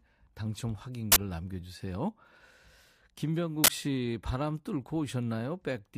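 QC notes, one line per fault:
1.12–1.16 s and 3.64–3.68 s, uninitialised buffer: sudden loud 40 ms bursts of harsh digital noise, where blocks played before any audio was written, outputting leftover memory.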